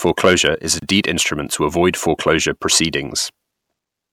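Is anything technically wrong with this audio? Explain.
Yes, there are two faults in this speech clip.

Hard clipping runs from 0.06 to 0.47 s, ending just before "is a". The signal overdrives a stage by about 5 dB, so the peaks are sliced flat. The flattened tops add high harmonics, heard as distortion on the peaks.

A gap at a join of encoded pieces appears from 0.79 to 0.82 s, right after "is a". Two separately encoded segments were spliced with the encoder's start delay and end padding left in, opening a 29 ms gap with smeared edges. The speech then resumes where it stopped.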